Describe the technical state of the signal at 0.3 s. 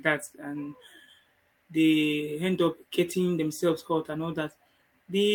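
The signal at 0.3 s is intact, with no fault audible at that moment.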